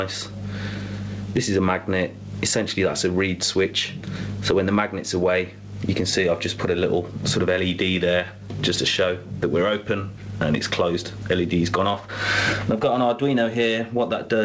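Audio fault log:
Throughout, gain pumping: level swings around 20 dB as loud sounds get pulled down, likely from excessive input gain driving a fast limiter or compressor.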